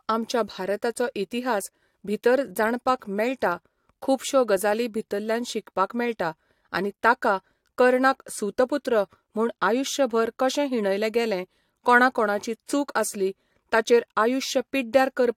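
No technical faults can be heard anywhere in this speech recording. At no point does the audio drop, break up or change character in a way that points to a problem in capture, processing or playback.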